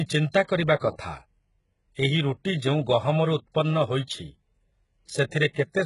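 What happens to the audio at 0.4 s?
Pre-echo occurs around that moment, from 0.32 to 0.34 s and again from 0.44 to 0.49 s, just before "କରିବା କଥା". The codec spreads quantisation noise across a whole transform block, so noise sized for the onset leaks into the quieter gap ahead of it. Each onset is preceded by a brief hiss, 20 ms and then 48 ms long, and the attack sounds softened.

The treble also sounds synthetic and gritty, with sibilance turning metallic, and nothing is present above 11.1 kHz. This is likely HE-AAC compression, consistent with a very low bitrate near 12 kbps, where spectral band replication rebuilds the upper band from copied lower bands.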